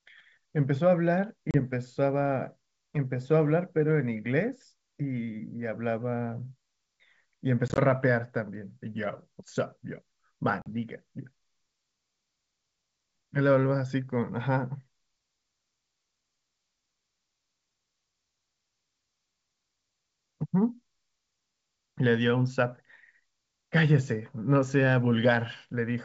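At 1.51–1.60 s, 7.68–7.79 s and 10.62–10.68 s the speech shows packet loss on an ADPCM call: 30 ms, then 60 ms scattered over 100 ms in runs of up to 20 ms, then 40 ms, each dropping to sharp-edged silence. On resumption, the decoder's predictor and step size no longer match the sender's, so speech returns with brief slight distortion before settling. Between drops, the clean 7 kHz G.722 band points to its full 64 kbit/s mode.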